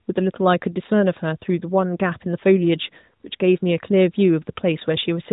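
Nothing stood out on listening to this speech recording.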